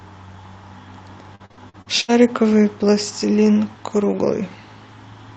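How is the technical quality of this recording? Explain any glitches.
The recording has one clear glitch. It passed through a call-codec chain whose content stops at about 8 kHz, which fits an Opus call link. Between 1.35 and 2.10 s, repeated packet loss (robotic sound) breaks up the speech. There are six gaps, the longest 73 ms, and roughly 40% of that stretch is covered by extending the preceding audio, so it sounds choppy. On a spectrogram, the harmonics are interrupted by smeared, repeated frames and abrupt holes. The waveform shows near-identical repeated chunks.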